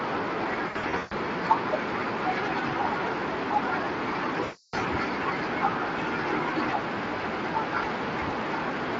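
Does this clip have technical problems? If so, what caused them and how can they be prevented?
Yes. VoIP packet loss concealed by the speech codec, at 0.67 to 1.13 s and 4.43 to 4.75 s: the decoder stretches the last sound into a fading buzz or coloured noise instead of clean silent gaps, and the light Speex coding is not to blame. Using a jitter buffer with forward error correction or redundancy on a steadier network would prevent it.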